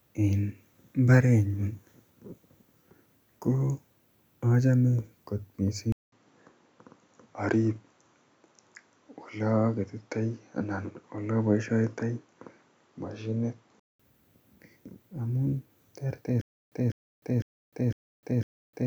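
Speech that runs into two separate problems. From 5.92 s to about 14.0 s the sound goes dull and boxy, with nothing above 7.6 kHz. A brief dropout of around 200 ms marks the change, and a faint new noise floor appears well down, around 50 dB below the speech, while the level itself stays about the same. That's an input switched to a poorer device, most likely a jump to a different mic or a headset's call profile with a narrower band, before it switches back. Then from 16.41 s, right after "amun terter", it falls into a stutter with silent gaps all the way to the end. A 0.2 s fragment plays, then about 0.3 s of dead silence, repeating every 0.5 s or so, five times. It sounds like the player or stream stalled and likely kept replaying its last buffered chunk on each retry, so whatever should have come after is gone.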